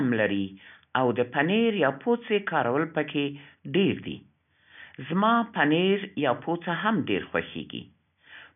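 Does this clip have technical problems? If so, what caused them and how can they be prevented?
No, there's nothing to fix here; the only thing in the background is a little room noise sitting about 53 dB below the speech, which is just part of the space it was recorded in.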